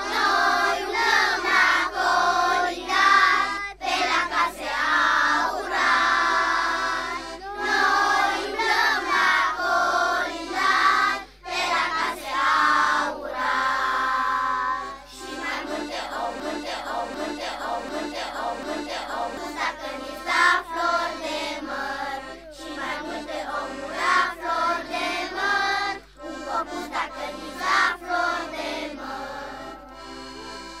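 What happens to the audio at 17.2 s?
At 17.2 s the sound is caught in a broken-record loop: from 16.40 to 19.37 s the same 0.74 s fragment plays four times back to back, identical each pass. The likely cause is a stalled player, encoder or stream resending its last buffered piece, so the audio due in that span is lost.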